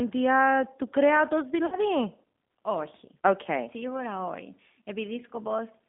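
The speech sounds narrow and slightly rough throughout, with a faintly synthetic edge on the voice and no content below about 200 Hz or above about 3.6 kHz. That band and texture point to the G.729 codec, most likely the G.729A variant at 8 kbit/s. It rebuilds each frame from a vocal tract filter, a pitch predictor and a few pulses rather than the waveform itself, so the damage is plainly audible. Just after "του κρέατος", from 1.66 to 1.78 s, the sound is stretched out and fades and then recovers weakly. This is VoIP packet loss concealed by the speech codec. About 60 ms of audio went missing, which fits roughly three lost packets. The decoder repeated its last pitch and filter at falling gain, and because each frame builds on the previous one, the distortion carries on past the gap itself.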